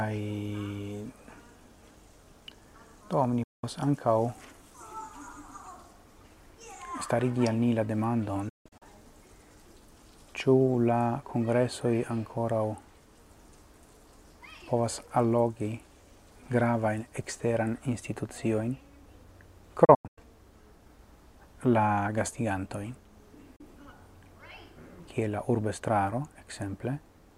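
The audio drops out four times, each a quick 8 ms fade into silence: about 0.2 s at 3.43–3.64 s; several short holes scattered across 8.49–8.82 s and again across 19.85–20.18 s; and a brief gap at 23.56–23.61 s. This is digital broadcast dropout: the receiver muted whenever frames failed to decode and lost their content for good. Gap lengths in multiples of 32 ms fit 32 ms frames.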